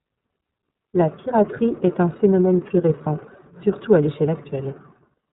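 Throughout, iLBC codec coding leaves nothing above 3.8 kHz and a rough, synthetic edge from independent 30 ms frames, fitting 13.33 kbps; unlike plain band-limiting, it adds grit.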